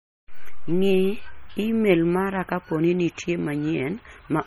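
Speech with heavy MP3 compression throughout, the watery, swirling texture pointing to a likely low bitrate near 32 kbps. Weak frequency lines blink on and off between frames, yet treble still reaches about 21.3 kHz, so it's codec damage, not plain low-pass dullness.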